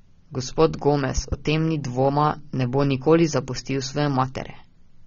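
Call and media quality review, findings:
Speech band-limited throughout, nothing above 7.6 kHz; dull, smeared, plainly audible warbling on sibilants. Likely AAC compression, AAC-LC at a low rate, consistent with roughly 24 kbps; encoder lowers cut-off, coarsely quantises remaining frequency lines.

Loud pop, double, 1.17 to 1.35 s; two sharp transients peaking about 10 dB above the speech, which continues underneath. Likely an electrical step or pulse (connector, switch, static or driver glitch) summed into the signal path.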